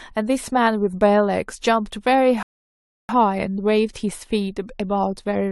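At 2.43 s the speech just stops dead and sits in silence until 3.09 s, then picks up exactly where it left off. That's a rebuffering stall: the player ran dry on downloaded audio and waited, so nothing's missing, but about 0.66 s of dead air got added.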